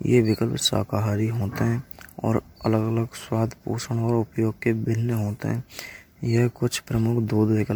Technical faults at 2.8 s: generation loss

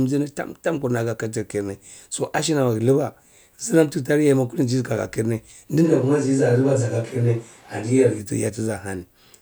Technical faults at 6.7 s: switch to a distant microphone

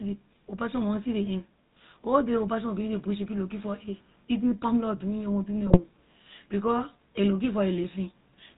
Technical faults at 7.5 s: GSM full-rate codec

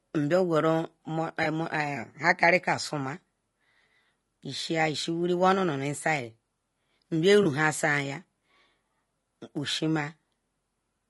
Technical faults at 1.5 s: low-delay AAC compression; AAC frame loss with concealment

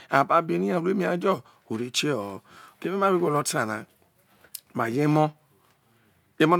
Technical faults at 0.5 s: none

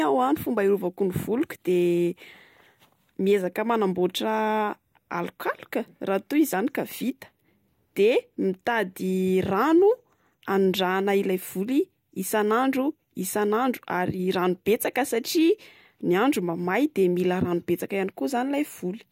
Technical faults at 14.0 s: none

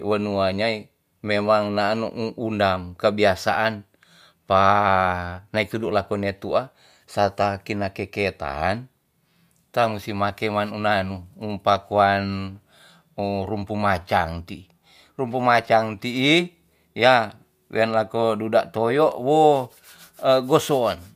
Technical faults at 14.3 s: none

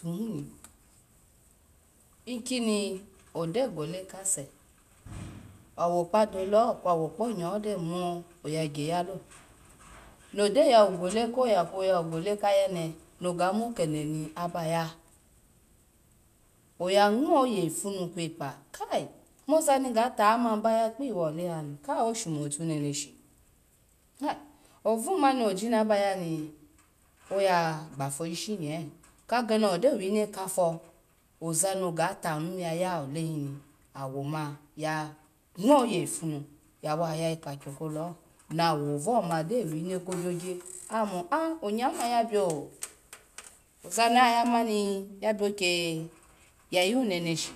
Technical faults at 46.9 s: none

